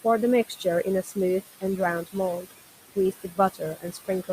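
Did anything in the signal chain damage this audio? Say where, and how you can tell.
Yes. Throughout the clip the room noise, sitting about 14 dB below the speech, pumps down between phrases and swells back under them. These are noise suppressor artifacts from call processing: per-band gain cuts the estimated noise by about 16 dB, frame by frame.

The same call-processing stage also produces speech cut by the noise suppressor. From 0.48 to 0.65 s, and again across 2.96 to 4.29 s, soft syllables sound swallowed, dropping by up to about 14 dB and about 17 dB. Roughly half a second of speech in total was mistaken for noise and attenuated.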